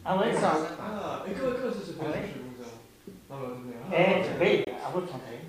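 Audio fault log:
4.64–4.68 s, Bluetooth dropout: a brief silent hole of about 23 ms, likely one audio frame arriving too late and dropped; sound then resumes further along.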